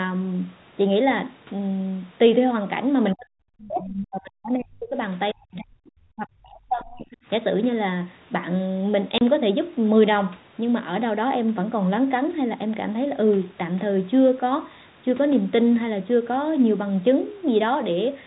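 From 3.14 to 4.97 s, then 5.33 to 5.91 s and 6.16 to 7.18 s, the speech dips sharply, as much as about 40 dB. This is speech suppressed in double talk, likely the echo canceller muting both voices at once. At 3.66 to 3.85 s, the other side's voice leaks through faintly, roughly 15 dB below the speech, probably residual loudspeaker echo. At 9.18 s, a 30 ms hard-edged silent gap is packet loss filled with silence, fitting one dropped packet.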